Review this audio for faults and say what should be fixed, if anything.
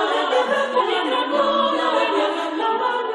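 Damaged data in the compressed stream causes two brief glitches, at 0.79 to 0.81 s and at 2.60 s. Corrupt bytes make the decoder lose frame sync and resynchronise. Checksum the stream and verify file integrity after every transfer.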